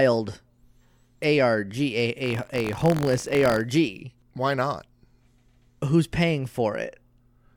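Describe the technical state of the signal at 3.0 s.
At 3.0 s the speech is in a stretch of buffer tearing, from 2.22 to 3.63 s. Writer and playback have drifted, so each buffer carries a small slice of audio from one lap earlier. That gives a steady 46.9 Hz robotic rattle, which fits a 1024-sample buffer. Unlike an underrun, there are no silent gaps.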